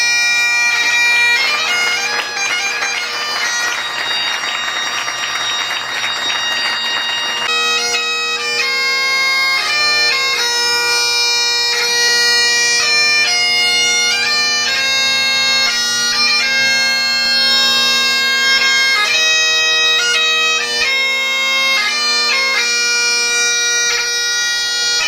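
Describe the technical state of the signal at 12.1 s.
At 12.08 s, compressed frames are skipped. Roughly 20 ms of audio goes missing, consistent with two 10 ms frames dropped. The audio jumps ahead by that length.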